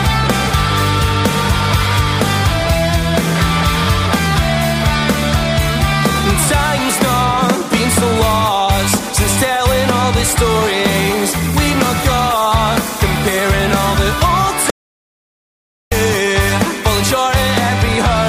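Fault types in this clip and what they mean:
Audio dropout to silence: At 14.70 s the sound cuts off abruptly and does not return until 15.92 s. That leaves a gap of about 1.2 s. The gap is silent, with no room tone or background underneath. Whatever sounded during that stretch is lost. The likely cause is a lost input, such as a disconnected device, a failed link or an accidental mute, while the recorder kept writing silence.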